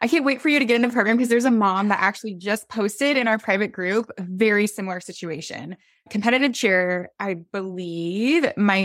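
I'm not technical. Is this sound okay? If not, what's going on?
Yes, nothing stood out as a problem when listening to this recording.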